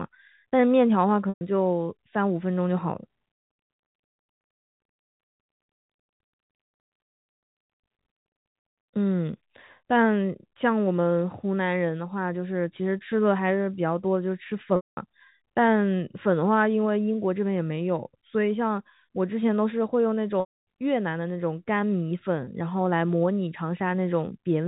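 Over the telephone-band speech, packet loss with pitch repetition occurs at 1.29 s (120 ms), 14.76 s (210 ms), 20.4 s (270 ms) and 22.44 s (30 ms). The receiver loops the last pitch period: the brief gap sounds buzzy and held, while longer gaps fade toward silence before speech cross-fades back.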